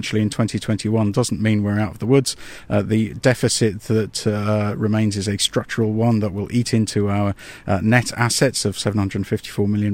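Speech recording, with no audible technical faults present.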